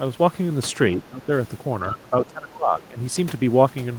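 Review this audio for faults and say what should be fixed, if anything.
The speech dips twice, from 0.93 to 1.31 s and again from 1.87 to 2.98 s. In both stretches the level falls by something like 15 dB at its deepest. This is speech suppressed in double talk, likely caused by an echo canceller that heard both sides at once. It could not tell the local voice from the loudspeaker echo, so it turned everything down. The fix is a canceller with better double-talk detection, so it keeps attenuating only the echo path.

The other side's voice leaks through in two short scraps, near 1.92 to 1.96 s and near 2.80 to 2.85 s. The first is perhaps 15 dB under the speech. The second is fainter, around 25 dB down. Both fall inside the second dip and are brief. This is the far-end voice leaking through. The likely cause is that the loudspeaker's playback reached the microphone and the canceller did not fully remove it. 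Better echo-path modelling or a headset would prevent it.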